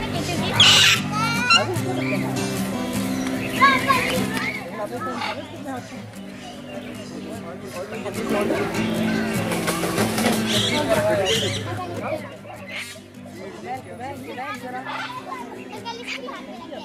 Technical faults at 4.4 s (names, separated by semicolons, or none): zipper noise